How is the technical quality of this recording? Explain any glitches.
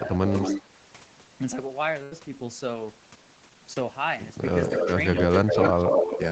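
The recording has several call-related glitches: two stretches of echo, a brief level dip at the start, and two packet-loss events, all heard over audio that stops at 8 kHz, consistent with a wideband Opus call path.

From 0.00 to 0.29 s the opening speech dips by about 10 dB, for roughly 0.2 s in total, and sounds ducked. This is likely speech suppressed in double talk: with both ends active, the echo canceller attenuated the near talker along with the echo.

An echo leak is heard from 0.33 to 0.62 s, a copy delayed by 232 ms at about 5 dB below the speech. A second one runs from 5.15 to 6.20 s, delayed 246 ms and at roughly equal level. The likely cause is a loudspeaker on one side whose echo canceller failed to remove the microphone pickup.

A burst of packet loss occurs at 2.03 to 2.13 s. About 80 ms of audio is missing, and the receiver extended the last sound over the gap while fading it. 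This gives a held buzz or hiss before the speech resumes further along.

Short concealed packet loss appears at 3.73 to 3.78 s, where about 20 ms never arrived in time. The decoder synthesised roughly 23 ms from the preceding signal and blended it back, heard as a brief smear or wobble.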